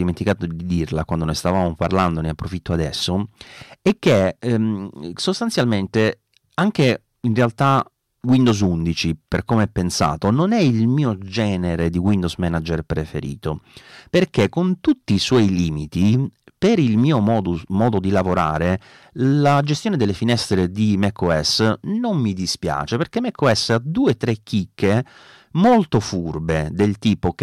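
Hard clipping runs through the whole of this speech recording: the signal is driven about 8 dB past what one stage can pass, so a small share of peaks are sheared flat, and those squared tops throw off high harmonics heard as crackly fuzz on louder syllables.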